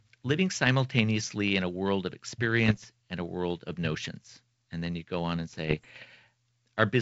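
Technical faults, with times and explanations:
2.66–2.86 s, bit errors on an ADPCM link: after "in a world of" and before "and a world of", pops and rough bursts with brief level jumps. Each flipped bit corrupts the G.722 decoder's step size and predictor, so the damage rings on for milliseconds.
5.52–6.04 s, bit errors on an ADPCM link: after "you go on and", a longer rough stretch at an error rate of a few tenths of a percent, with repeated pops as the adaptive state keeps being knocked off track.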